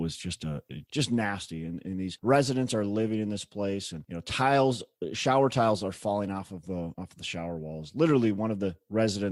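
Nothing goes wrong anywhere in this stretch of speech; there's simply no technical fault to point to.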